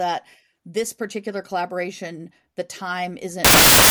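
Speech clip in which the final stretch, from 3.45 s to the end at 3.91 s, breaks into loud, harsh broadband noise: samples built from the wrong bytes. The reader misassembles each sample's bytes, so the fast-changing low bits dominate.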